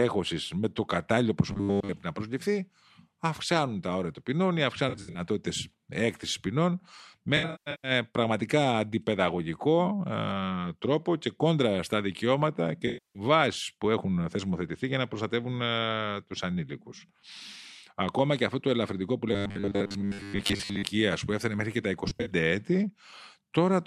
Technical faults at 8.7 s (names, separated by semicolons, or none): none